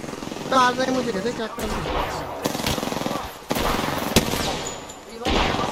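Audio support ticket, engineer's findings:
No fault found in the audio; nothing to report for this ticket.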